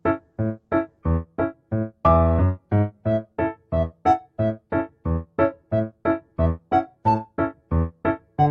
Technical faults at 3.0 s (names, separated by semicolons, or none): none